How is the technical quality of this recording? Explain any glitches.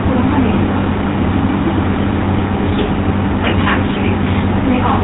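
Quality is poor, with two faults running through the whole recording.

Hard clipping, throughout: the speech drives the signal about 5 dB past what the chain can pass, so a few percent of samples have their peaks sliced flat. This adds crackly, harsh distortion on louder syllables.

GSM full-rate codec, throughout: the speech passed through the original GSM coder, which fits a 13 kbps stream. It rebuilds the voice from a vocal-tract model driven by sparse pulses and removes everything above 3.8 kHz. This gives a plainly audible muffled, buzzy, gravelly roughness.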